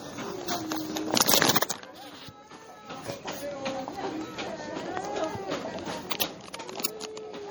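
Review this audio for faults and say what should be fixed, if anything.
Throughout, the sound is watery and swirly. This is MP3 compression, likely at a low bitrate around 48 kbps. Encode at a higher bitrate.

Pre-echo appears at 6.20 s and 6.83 s. A short hiss of 13 ms and 19 ms smears ahead of each attack. Use shorter transform blocks or more bits.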